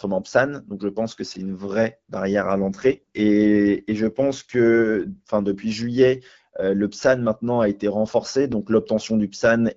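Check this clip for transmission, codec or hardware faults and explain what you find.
Two faults are present in this wideband AMR speech, which runs at 12.65 kbit/s around them.

From 2.40 to 5.47 s, an AMR rate drop to 8.85 kbit/s, with bits shifted to error protection, makes speech rougher. The spectrogram keeps its full band while harmonics smear.

At 8.52 s, a repeated buffer replays a 2.67 ms chunk once because new data arrived late, which fits a 128-sample buffer. It gives a click, seen as a hard waveform join and a thin vertical spectrogram line.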